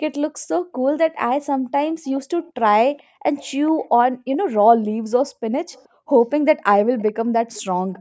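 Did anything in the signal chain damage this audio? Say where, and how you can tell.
Yes, in the call processing. A faint echo leak trails the speech by 428 ms at 1.89, 2.97, 3.35, 4.32, 5.72, 6.98 and 7.54 s. It is likely an echo canceller sending leftover loudspeaker pickup back.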